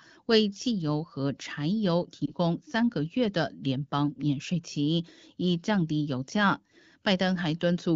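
A single speech frame in this wideband AMR call failed its checksum around 2.26 to 2.31 s, a lost AMR speech frame, so the decoder filled the gap by repeating the previous pitch and vocal tract settings at reduced gain. The speech gives a short dip or warble, consistent with one lost 20 ms frame, before clear HD Voice speech resumes.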